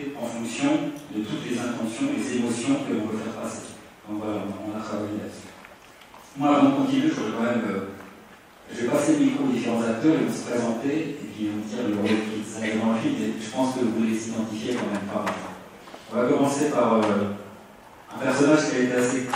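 Nothing here stands out as a technical problem; the audio runs along without any glitch, dropout or distortion worth pointing to.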